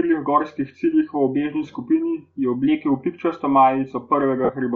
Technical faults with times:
0.00-4.76 Bluetooth LC3 compression
4.44-4.49 lost LE Audio frames

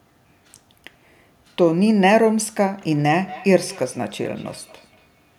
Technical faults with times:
2.91-5.38 feedback echo between two devices

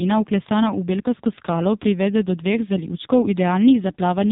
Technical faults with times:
0.00-4.31 AMR narrowband mobile codec

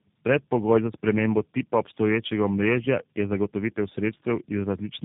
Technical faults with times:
0.00-5.05 tandem speech coding

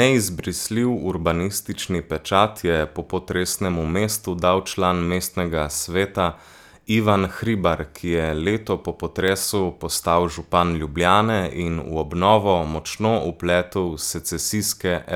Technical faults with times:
0.55 dropped samples
4.15 dropped samples
9.28 dropped samples
13.25 dropped samples

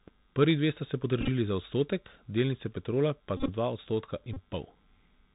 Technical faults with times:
0.00-5.34 Bluetooth CVSD headset codec
1.21-1.29 Bluetooth headset packet repeated
3.37-3.50 Bluetooth headset packet repeated
4.33-4.36 Bluetooth headset packet repeated

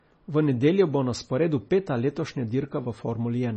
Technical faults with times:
0.00-3.57 MP3 compression

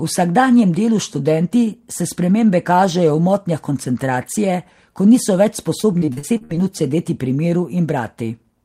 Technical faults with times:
5.81-6.59 repeated packet loss (robotic sound)

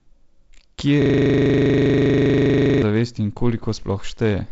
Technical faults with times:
1.02-2.82 system hang loop

